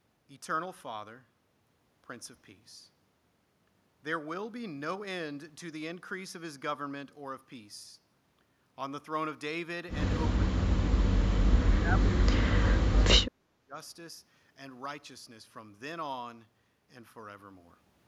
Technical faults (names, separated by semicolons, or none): speech suppressed in double talk